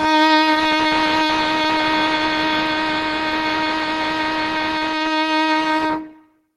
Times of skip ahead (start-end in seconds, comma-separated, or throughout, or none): none